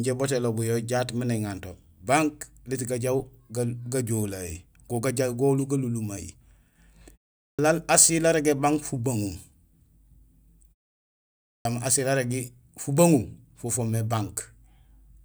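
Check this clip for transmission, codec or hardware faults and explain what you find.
Two clipped starts after a pause are present. Clipped start after a pause occurs at 7.50 s, after a 0.41 s pause, and at 11.58 s, after a 0.92 s pause. The playback device powers down or loses lock during silence and needs a moment to resume, so about 86 ms and 71 ms of speech respectively are swallowed. Each time the sound jumps in abruptly without its opening.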